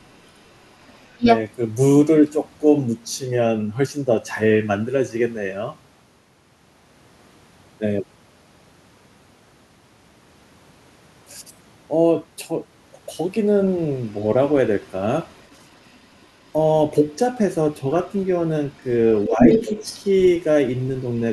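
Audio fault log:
0.11–1.39 s, 14.06–14.26 s, 15.38–16.5 s, 18.06–18.26 s, 18.74–18.93 s, 19.24–20.28 s: other side's voice leaking through. A second voice sits under the talker. In the opening stretch it is roughly as loud as the main speech, then faint, around 35 to 40 dB down, in the middle bursts, and strong again near 19.2 s. The likely cause is loudspeaker playback reaching the microphone and an echo canceller leaving a residue.
1.05–1.26 s and 19.27–19.47 s: speech suppressed in double talk. The talker's level dips for about 200 ms each time, steeply at first, dropping roughly 30 dB, and by roughly 10 dB later, just as the leaked voice overlaps. Both sides are talking at once here, and the echo canceller has likely failed to tell its own talker from the echo and turned everything down together.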